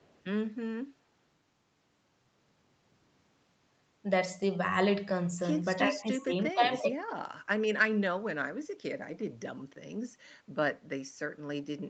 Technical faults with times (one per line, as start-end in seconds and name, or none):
0.00-0.22 echo leak
5.89-6.95 speech suppressed in double talk